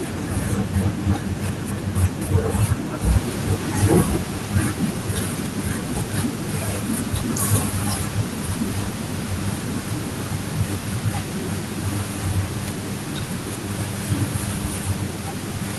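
Nothing stood out on listening to this speech, apart from the room's own background noise, which rises by about 12 dB at around 3 s and stays about 17 dB below the speech after that.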